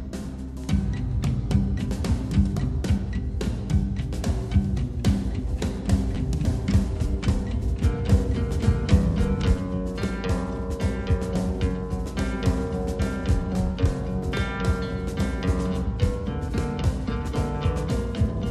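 New audio arrived late twice, at 7.6 s and 10.02 s, so the device replayed its last chunk once, which fits a 10 ms buffer. Each repeated buffer is a click or brief buzz with no audio lost.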